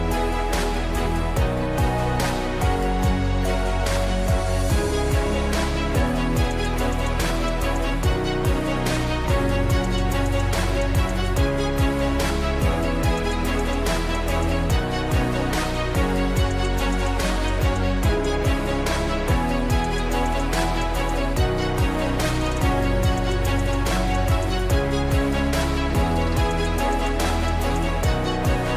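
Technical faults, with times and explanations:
No technical faults can be heard, so there are no times or explanations to give.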